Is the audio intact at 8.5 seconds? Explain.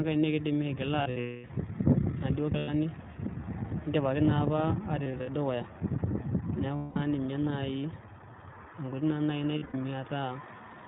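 No. At 8.5 seconds the speech sounds band-limited and muffled, with a plainly audible rough, slightly synthetic edge, and this continues through the whole recording. The cause is the iLBC codec, a narrowband VoIP coder that passes nothing above 4 kHz and encodes each short frame's excitation independently of the one before. It runs 20 ms frames at around 15.2 kbps.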